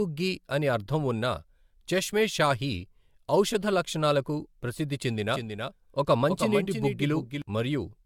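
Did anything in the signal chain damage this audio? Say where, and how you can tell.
Yes. At the codec stage the whole clip sounds swirly, smeared and hollow, with blurred consonant attacks and nothing above 17 kHz. That is generation loss, likely from about four rounds of AAC-LC encoding. Each pass requantises on a shifted frame grid, so the damage accumulates.

From 5.28 s to 7.42 s a doubled audio track appears. A full-band copy trails about 300 ms behind, roughly 5 dB quieter, with no decay or room colour. It starts and stops abruptly. The likely cause is a second, slower capture path or a misaligned edit.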